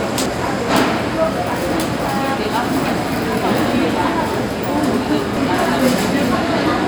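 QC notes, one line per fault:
0.26 s and 5.37 s: damaged data in a compressed stream. Each is a quick glitch. Some bytes in the encoded stream got corrupted, so the decoder couldn't make sense of those frames. It lost its footing and hunted for the next valid frame header before picking up again. That garbled stretch comes out as the glitch.
0.91 s: dropped samples. A single sharp click with no audible gap. The likely cause is a tiny slip of just a few samples, a fraction of a millisecond, missing from the stream. The waveform leaps from one value straight to a later one, and that instant step produces the click, which shows up as a thin vertical line across the spectrum. Far too brief to remove any actual sound.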